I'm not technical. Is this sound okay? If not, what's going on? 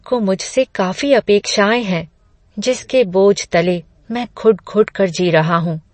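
No. MP3 compression damage runs through the whole clip: the speech sounds watery and dull, with nothing above about 8.3 kHz. The likely cause is heavy squeezing to save space, which cuts off the treble and drops quieter details that then flicker in and out.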